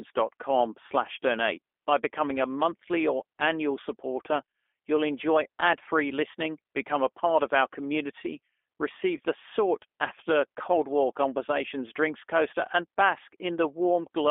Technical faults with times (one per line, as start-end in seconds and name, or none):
0.00-14.31 G.729 codec
9.17-9.20 VoIP packet loss concealed by the speech codec